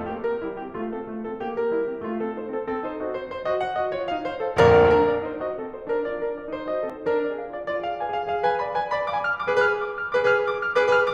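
At 4.60 s the music jumps, and at 6.90 s there's a bigger jump. Both sound like a dropped buffer (overrun): the recording side likely didn't pick up its samples in time, so the hardware overwrote them and the audio on either side got butted together. There's no gap, just a skip forward of roughly 20 ms the first time and around 70 ms the second.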